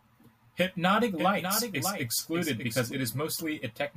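Speech with a doubled audio track from 1.18 s to 2.92 s: a full-band copy trails about 0.7 s behind, a few dB quieter, likely from a second, slower capture path. Unlike an echo, it has no decay or room colour and starts and stops abruptly.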